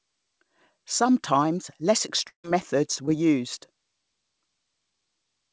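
From 2.28 to 2.46 s the speech drops out, likely a long network dropout. About 160 ms of audio never arrived, and the receiver stretched the last sound into a fading buzz before settling into roughly 100 ms of near-silence. The speech then resumes further on, with the lost part simply gone. Unlike a brief concealed gap, this one is long enough for the fill to die away, so it reads as a hole, not a smear.

At 3.06 to 3.09 s comes a short concealed packet loss. About 20 ms failed to reach the decoder in time, and the receiver bridged about 14 ms of it by continuing the preceding sound for a moment before blending back into the real signal. What you hear is a quick smear or wobble in the speech. That is what separates it from the dropout: the repair blends back into the speech instead of fading out. The whole clip, as carried over the call path, has nothing above 8 kHz, which points to a wideband call codec such as G.722.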